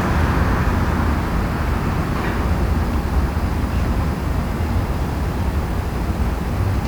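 From start to finish the audio carries low bit depth with dither: only 7 bits are used, and dither noise added before rounding turns the error into a steady, even hiss, roughly 25 dB below the signal, with no distortion. A spectrogram shows a flat, uniform noise floor across all frequencies.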